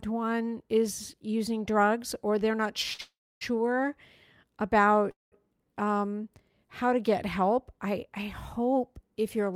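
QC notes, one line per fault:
2.93–3.01 s, short stall from a late packet: the last speech sound is held for about 54 ms with a faint buzzy smear while the jitter buffer waits on a late packet, then playback resumes from the same point, so nothing is lost but timing slips 54 ms.
3.01–3.43 s and 5.11–5.34 s, call audio freeze: the held sound decays into a buzz and then silence, about 280 ms and 170 ms of it, spanning roughly 401 ms and 209 ms in all. The likely cause is delayed packets draining the jitter buffer. Speech then continues where it stopped, so gaps are inserted and nothing is dropped.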